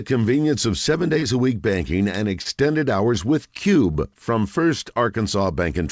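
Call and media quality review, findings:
Short concealed packet loss, three events of about 30 ms each: 1.19–1.25 s, after "convenience of seven" and before "a week banking and"; 2.42–2.48 s, before "hours with"; 3.92–3.98 s, just after "hours with". Symptom: brief smear or wobble, with no silent gap and no hard click. Receiver jitter buffer and decoder concealment extended the preceding sound across the hole, then crossfaded back. A plain dropout would leave audible silence instead. Audio is band-limited to 8 kHz, consistent with G.722 at 64 kbps.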